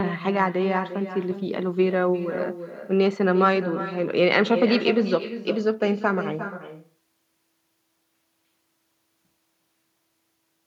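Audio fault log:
throughout, echo with no canceller: every phrase returns around 400 ms later as a quieter, thinner copy about 11 dB below the speech, because the far end's loudspeaker feeds its microphone and nothing removes the round-trip signal before it comes back.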